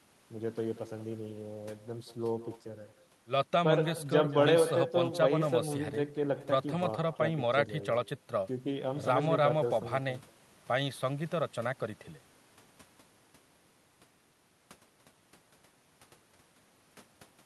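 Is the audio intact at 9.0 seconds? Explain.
No. At 9.0 seconds, as across the whole clip, the speech is trailed by a weaker, thinner copy of itself arriving about a fifth of a second later, sitting about 15 dB below the direct voice. This is echo with no canceller: the far end is playing the call through a loudspeaker, its microphone captures that playback, and with nothing subtracting it, the talker's own speech returns after the network round trip.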